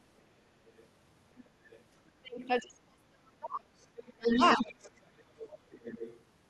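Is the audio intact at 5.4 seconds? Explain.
No. From 4.26 to 6.2 s a second, fainter voice runs under the speech, roughly 10 dB below it. This is the other side's voice leaking through, likely because the echo canceller left part of the loudspeaker playback in the microphone signal.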